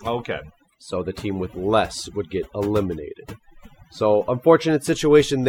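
Overdone noise removal runs throughout the speech. The suppressor's setting is too aggressive, so frequency bands sitting near its noise estimate are pulled down or cut entirely, including softer parts of the voice, leaving a near-silent background with twinkling specks.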